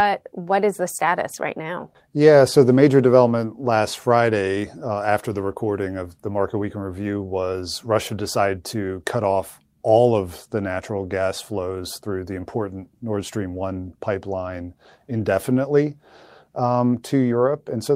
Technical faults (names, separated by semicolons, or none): none